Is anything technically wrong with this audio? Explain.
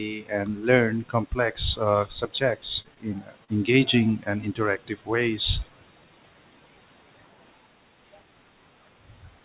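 Yes, there is short concealed packet loss at 2.82, 2.94 and 3.44 s. Each time a gap of about 20 to 40 ms never arrived, so the receiver extended the preceding sound and blended back, leaving a brief smear or wobble. The call path's sharp cut-off above 4 kHz points to G.711 mu-law coding.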